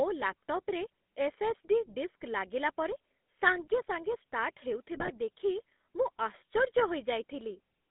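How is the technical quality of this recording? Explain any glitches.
The recording has been through a low-quality phone codec for its whole length, with a brief burst of corruption and two sharp clicks.

Throughout, the speech carries the gravelly, buzzy texture of the GSM full-rate codec. The band runs only from about 200 Hz to 3.6 kHz. The codec rebuilds the voice from a vocal-tract model driven by sparse, regular pulses. That thin excitation causes the roughness. The damage is plainly audible. The character fits the 13 kbps full-rate coder.

From 4.95 to 5.11 s there are GSM bit errors. Corrupted bits reached the decoder and scrambled its filter, pitch and gain values. The spectrum warps and the level jumps frame by frame. The result is a short squawking, gargling break. Its length fits about eight codec frames hit by an error rate of a few percent.

At 5.59 s and again at 6.79 s there is a single sharp click. 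Each is most likely dropped samples. A tiny fraction of a millisecond of audio goes missing, so the waveform jumps abruptly to a later value. Nothing audible is lost. The jump itself makes the click.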